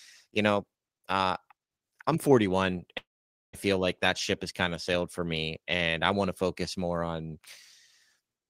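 At 2.97 s the speech breaks off, and the last sound smears into a brief fading buzz before settling into about 0.49 s of near silence. The audio returns at 3.55 s with roughly 0.56 s gone, consistent with a long network dropout, likely.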